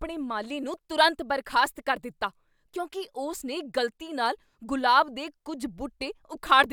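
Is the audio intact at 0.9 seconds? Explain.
Yes, the speech at 0.9 seconds plays through intact, with no dropout, click, distortion or other fault at that moment.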